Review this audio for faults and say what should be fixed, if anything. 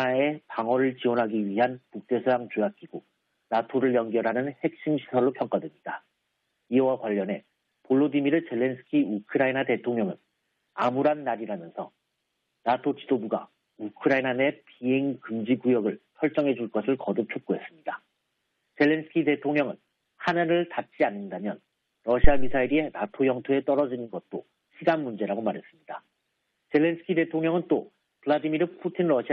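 A phantom power thump hits at 22.24 s. It peaks near about -3 dBFS and decays in about 98 ms, ending by 22.68 s. Switching the supply on a live input sent a DC step through the coupling capacitors. Mute the channel before toggling phantom power.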